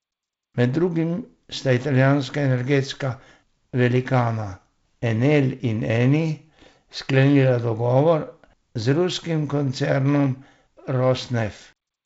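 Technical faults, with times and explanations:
The speech has passed through G.722 wideband telephone coding at 48 kbit/s, which leaves nothing above 7.7 kHz and a light coding texture, and there are no technical faults in the signal.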